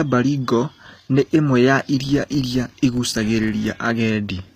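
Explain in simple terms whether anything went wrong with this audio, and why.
The speech was likely squeezed through HE-AAC compression, which keeps only the lower sounds and rebuilds the treble by copying lower parts upward. The damage is plainly audible throughout: nothing remains above about 15 kHz, and the rebuilt treble doesn't match the original, so s sounds lose their natural quality.

From 1.97 to 3.79 s, just after "nĩ ĩmwe ya", a processing filter restarted on every block, forgetting its state and starting each small chunk of audio from silence. Each restart leaves a tiny click, and together they form a steady buzz at about 43 Hz that follows the speech's loudness.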